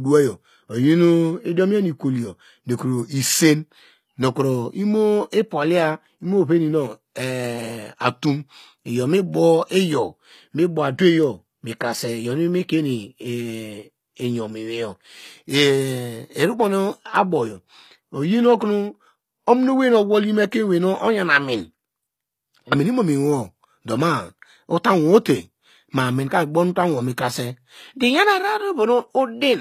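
HE-AAC compression runs throughout the speech, likely at a low bitrate near 24 kbps. The treble is copied up from lower bands, so s sounds come out gritty, metallic and lispy.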